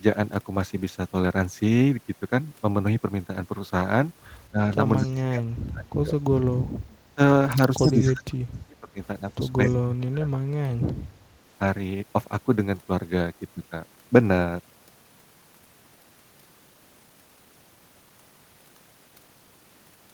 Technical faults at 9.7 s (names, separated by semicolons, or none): speech suppressed in double talk